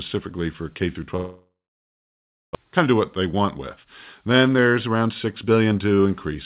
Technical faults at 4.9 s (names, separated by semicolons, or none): jitter buffer speed-up